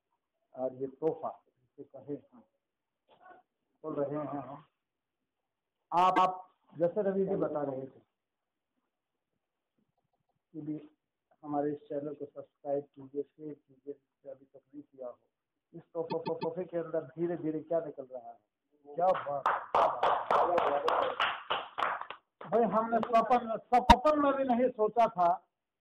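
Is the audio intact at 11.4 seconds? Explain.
Yes, the audio is intact at 11.4 seconds, with no dropout, click, distortion or other fault at that point.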